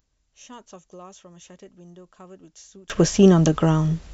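From the start to 2.9 s, the speech almost vanishes in mono, falling by about 32 dB. This is a case of one channel inverted. One stereo side likely has reversed polarity, so the shared centre cancels out. Only a faint trace survives.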